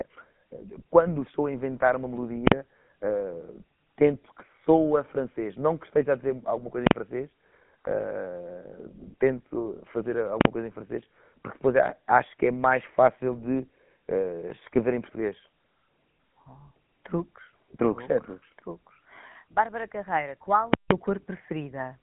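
Throughout, the GSM full-rate codec gives the speech a buzzy, gravelly roughness. The spectrogram shows nothing above about 3.8 kHz, which fits a 13 kbps GSM stream. At 2.48 s after "estou a inventar uma", 6.87 s after "alguma coisa em", 10.41 s, and 20.74–20.91 s, invalid numbers at full scale pin the waveform flat at one extreme value, far beyond the speech peaks. The short 43 ms blocks give single bangs, while the 171 ms block pops at both edges with no sound between.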